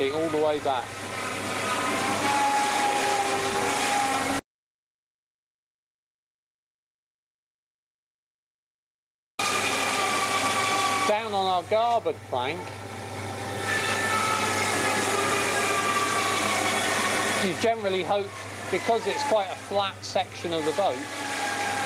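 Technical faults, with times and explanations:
No technical faults can be heard anywhere here.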